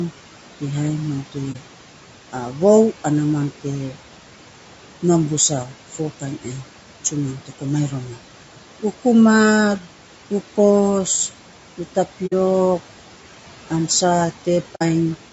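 Throughout the speech, noise suppressor artifacts are present. The suppressor pulls down bands it judges to be steady noise, cutting the room noise (which sits about 19 dB below the speech) by about 12 dB. As a result, the background drops in the gaps and swells back under the voice.

Also throughout, the voice sounds rough and grainy, with a hiss filling the spaces between harmonics and a thinned, artificial top end. This plainly audible codec damage is likely low-delay AAC compression (AAC-ELD) at about 32 kbps.

AAC frame loss with muting occurs three times. The first is at 1.52–1.57 s, just after "mam te", consistent with one missing frame. The second is at 12.26–12.33 s and the third at 14.75–14.82 s, each fitting two lost frames. In each case the decoder zeroed the missing spectrum, so the sound fades out and back in through the overlapping windows, leaving a brief dip for the single frame and a soft-edged gap for each pair.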